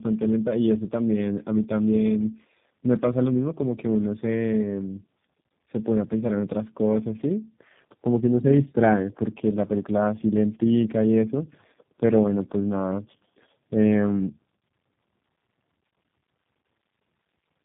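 Tandem speech coding runs through the whole clip. The speech passed through two low-rate speech codecs in a row, with a plain telephone-grade link between them. The sound fits G.723.1 at around 6.3 kbit/s feeding G.729A at around 8 kbit/s. The second coder re-encodes the first one's errors and adds its own, so the speech comes out rough, warbly and dull. Nothing is present above 3.8 kHz.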